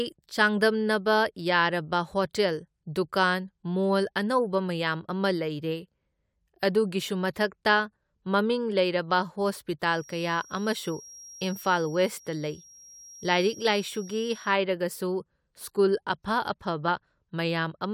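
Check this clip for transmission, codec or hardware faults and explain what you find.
A feedback whistle runs from 9.84 to 14.58 s: a thin, steady tone at 5.6 kHz sits roughly 25 dB below the speech and swells and fades slowly in level. It is likely a loudspeaker-to-microphone loop held just at the edge of feedback, sustaining that single frequency without building up.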